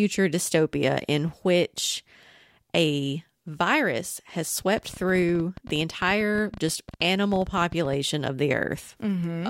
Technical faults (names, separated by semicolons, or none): train of clicks